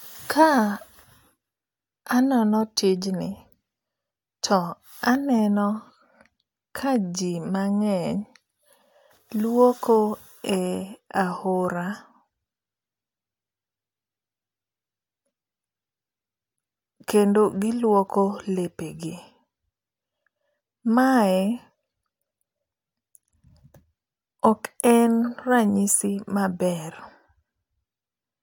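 Nothing technical goes wrong anywhere in this recording, so there's no fault to point to at any moment.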